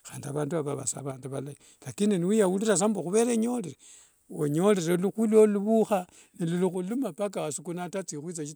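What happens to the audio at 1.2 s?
At 1.2 s the speech briefly dips in level: from 1.12 to 1.24 s, about 0.12 s, it falls by about 6 dB and then returns. The likely cause is one channel dropping out, so the mono sum loses half of the content shared by both sides. On a waveform this appears as a sudden step down in amplitude with sharp edges. On a spectrogram it shows as a short band that is uniformly fainter across all frequencies.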